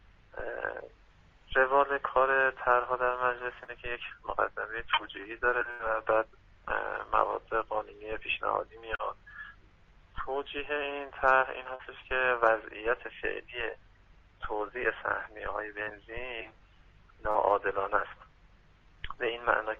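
Short concealed packet loss occurs at 3.63, 8.95, 11.75, 15.83 and 17.31 s. Each time about 40 ms of audio arrives too late or not at all, and the decoder bridges the hole by extending the preceding sound before blending back, leaving a brief smear or wobble. A burst of packet loss runs from 5.71 to 5.82 s. About 80 ms goes missing, so the receiver keeps the last sound going and lets it fade as a held buzz or hiss before the audio resumes further on, with that stretch gone.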